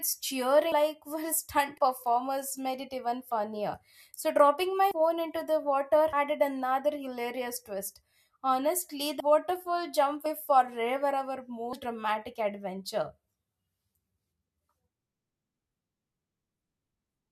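Brief glitches, each with the speech jumping ahead, occur at 0.72, 1.78 (between "were stunt" and "performers made it even"), 4.91 ("dropping my" into "phone into"), 6.13 (just before "added another hilarious twist"), 9.2, 10.26 and 11.73 s. These are compressed frames skipped. Runs of whole frames, which fits a 32 ms frame, were never decoded. Each jump drops roughly a tenth to a fifth of a second.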